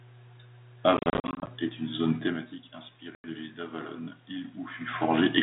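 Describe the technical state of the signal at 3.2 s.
At 3.2 s the signal is inside a gap from packet loss on an ADPCM call, spanning 3.15 to 3.27 s, with about 90 ms of speech missing, roughly ten packets. The waveform drops abruptly to flat silence, and the spectrogram shows a blank vertical band with sharp edges. Because the decoder's adaptive predictor and step size lose track of the sender's, speech returns slightly distorted before settling.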